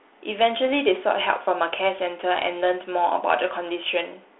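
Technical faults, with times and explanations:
No technical faults are heard, so there are no times or explanations to give.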